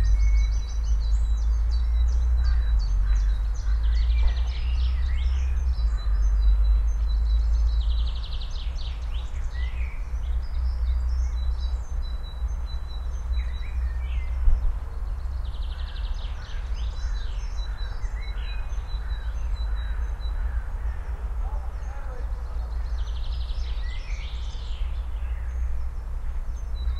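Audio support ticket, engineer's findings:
Engineer's findings: no faults found in this recording of sounds.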